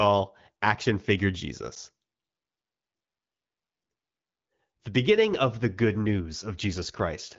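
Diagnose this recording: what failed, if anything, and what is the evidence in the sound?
A block of digital silence at 1.75 s, at the driver or buffer stage: about 11.6 ms of zeros, which fits an unfilled 512-sample buffer. Hard edges, and at under 15 ms it is heard as a tick or dip rather than a concealed, faded gap.

An AMR rate drop from 6.06 s to the end, just after "beginning of the good": the network pushed AMR-WB from 12.65 to 8.85 kbit/s, so speech turns rougher. The band and continuity are unchanged, unlike a narrowband handover.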